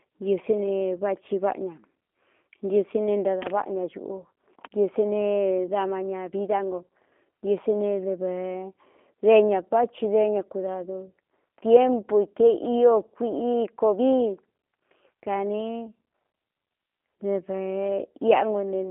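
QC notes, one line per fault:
Throughout: G.729 codec. The speech sounds rough and slightly synthetic, as if rebuilt from a vocal tract model and sparse pulses, which fits an 8 kbit/s codec. On a spectrogram there is a band from 250 Hz to 3.4 kHz, nothing above 3.5 kHz, and smeared harmonics.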